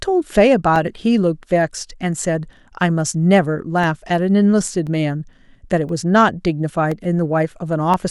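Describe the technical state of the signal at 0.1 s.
At 0.1 s the signal is intact, with no dropout, distortion or other technical fault to be heard.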